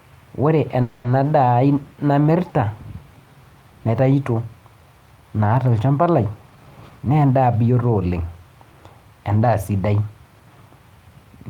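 A speech recording with two timing faults. From 0.81 to 1.18 s there is a call audio freeze: the sound stalls into a fading buzz for roughly 230 ms before speech resumes exactly where it stopped, with nothing lost, so everything after it arrives about 230 ms later. This is likely packets held up in transit that emptied the receiver's jitter buffer, which then stretched the last sound. A spectrogram shows the final harmonic stripes running flat and dimming, and the waveform shows the same cycle repeated with shrinking amplitude. From 6.42 to 8.14 s a jitter buffer speed-up makes the speech run at about 114% speed while its pitch stays the same, so it sounds hurried. The receiver was trimming excess buffered delay by repeatedly cutting out short pitch-period slices, about a fifth of a second in total. On a spectrogram, syllables and formant movements are squeezed in time while harmonic spacing stays constant. 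The waveform keeps normal-width pitch cycles, just fewer of them.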